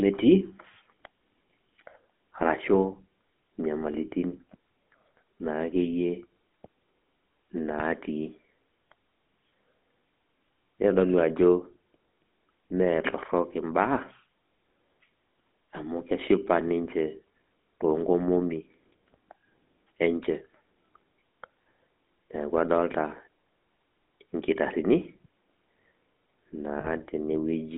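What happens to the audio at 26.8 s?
At 26.8 s, lasting until about 26.87 s, there are lost GSM frames. The decoder fills the gap by repeating the parameters of the last good frame, with the level usually falling from the second lost frame on, and the missing stretch points to about 40 ms of audio, which fits two 20 ms frames. It sounds like a brief rough, metallic ring where the sound is held rather than continuing. On a spectrogram this appears as a short smear of frozen, repeated spectral bands. The waveform shows a repetitive segment.

The GSM full-rate codec is present throughout, so the same buzzy, gravelly texture and narrow band are heard around the dropout. On a spectrogram nothing appears above about 3.5 kHz, and there is little below 200 Hz.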